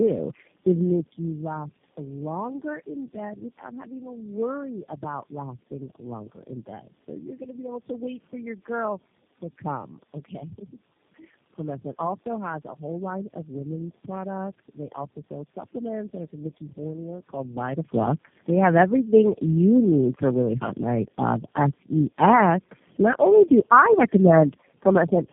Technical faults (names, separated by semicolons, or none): tandem speech coding